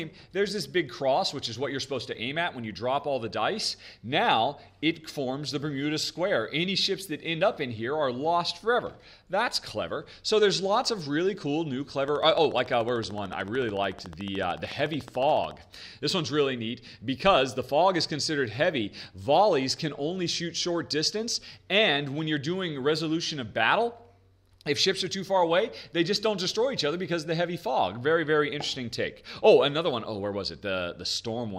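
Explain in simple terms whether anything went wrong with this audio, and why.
A train of clicks runs from 12.08 to 15.52 seconds. It is a steady ticking, about 14 clicks per second, roughly fifty in all, heard over the sound. The likely cause is interference from nearby equipment, or a faulty connection or power supply.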